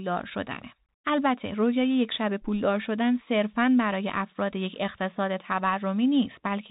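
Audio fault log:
throughout: Bluetooth CVSD headset codec. The speech stops at 4 kHz. Each sample is one up-or-down step of adaptive size, which fits a 64 kbps CVSD link. Loud high sounds outrun the step and distort. S sounds turn scratchy over a granular hiss.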